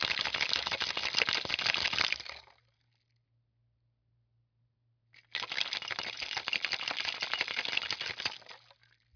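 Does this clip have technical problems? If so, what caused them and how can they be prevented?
No, the recording of these sounds has no audible technical faults, so there is nothing to trace back or prevent.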